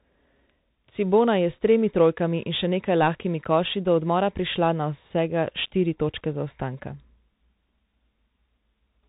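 The speech passes throughout through a Bluetooth CVSD headset codec, consistent with 64 kbps, cutting everything above 3.8 kHz and leaving scratchy s sounds over granular hiss.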